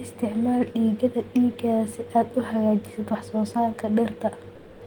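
At 4.55 to 4.81 s, comfort noise replaces the background: a steady, featureless hiss about 3 dB quieter, likely discontinuous transmission, unlike a gate's true silence.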